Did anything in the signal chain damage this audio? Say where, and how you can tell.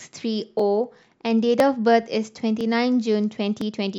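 Yes. Overlapping chunks at 0.59, 1.60, 2.61 and 3.61 s leave a short click or stutter in the speech at each point, about one second apart. The damage comes from the buffer or block-processing stage. The audio was handled in 1.0 s chunks, and each new chunk began about 6.5 ms before the previous one ended. That stretch of sound plays twice at every join, and the doubled fragment makes a regular tick.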